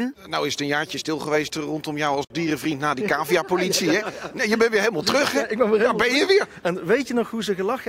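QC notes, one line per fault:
2.25–2.30 s, gap at a join of encoded pieces: separately encoded segments were joined with the encoder's delay and padding left in, opening a 55 ms silence with smeared edges before the sound resumes.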